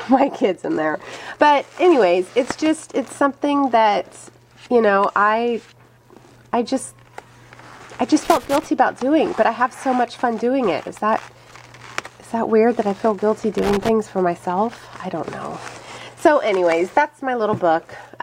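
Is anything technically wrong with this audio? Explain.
Yes, loose connector crackle from 8.25 to 8.66 s and 13.58 to 13.89 s: a worn contact chops the signal in irregular scratchy bursts, unlike the single clicks of digital dropouts.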